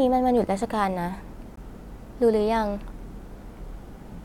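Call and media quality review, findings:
Gap between stream segments at 1.56 s in speech: hard-edged silent hole, about 16 ms, no audio lost. Probable component: segmenter/player timestamping. Boundary timestamps leave a small gap; player pads it with silence, adding about 15.5 ms to the timeline.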